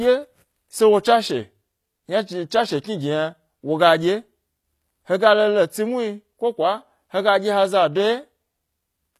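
From start to finish the speech carries plainly audible damage, most likely from HE-AAC compression at a low bitrate, something in the region of 24 kbps. The treble here isn't the real thing: the codec keeps the lower spectrum and fakes the top by copying bands upward, so harmonics don't line up above the crossover. That's why the s sounds come out gritty and a bit lispy, and nothing at all sits above 15 kHz.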